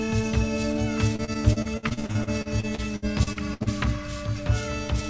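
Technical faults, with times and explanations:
1.16–3.69 s, repeated packet loss (robotic sound): about 21 short dropouts, the longest 65 ms, come in close succession, and each is patched by stretching the last received sound, so over a quarter of this stretch is concealment. The result is a choppy, robotic texture. The spectrogram shows smeared, repeated bands and abrupt breaks, all capped at 8 kHz by the wideband call codec. The waveform shows chopped, looping segments.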